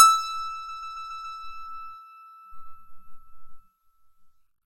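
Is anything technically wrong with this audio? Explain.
Yes. The music has a fault of repeated frames from 0.68 to 1.37 s. A block of about 139 ms is played again five more times. That points to a short run of compressed frames, perhaps six, being written or sent more than once. The decoder plays the same slice over and over. It is heard as a rhythmic stutter that holds the music in place. The repeats add about 0.70 s to the clip.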